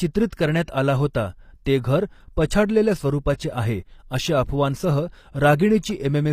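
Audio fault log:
throughout: HE-AAC compression. The speech carries plainly audible codec damage across the whole clip. The treble stays bright but does not ring true, and s sounds come out gritty and metallic. This is likely HE-AAC coding at a low bitrate, and the sound fits about 24 kbps with the v2 stereo tools. Only the lower spectrum is coded properly. The upper bands are rebuilt by copying lower ones upward, so their harmonics fail to line up.
1.14 s: pre-echo. A brief hiss of about 12 ms comes just before the attack that opens "ते घर पछाडलेल्या स्वरूपाचे". The onset itself sounds softened and smeared. The attack lands late in a transform block. The codec spreads quantisation noise evenly across that block, sized for the loud attack. That noise therefore spills into the quiet instant before it and is heard ahead of the sound.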